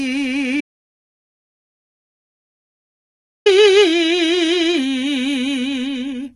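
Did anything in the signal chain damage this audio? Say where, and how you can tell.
Yes. HE-AAC compression, across the whole clip: the music has heavy codec damage, and nothing is present above 11.8 kHz. The treble that remains sounds rebuilt rather than captured, with gritty, metallic highs whose overtones don't sit cleanly on the harmonics below. That points to the codec stage and likely to HE-AAC, where spectral band replication copies lower bands upward under a coarse envelope, which fits a starved bitrate of around 16 kbps.

Audio dropout to silence, from 0.61 s to 3.46 s: the music cuts off abruptly and returns mid-flow about 2.85 s later. The gap is silent with no residual noise or room tone, so the signal path was writing silence rather than recording a quiet passage. That places the fault upstream at capture or transport, likely a lost input through a disconnected device, a failed link or a mute, and whatever played during that stretch is gone.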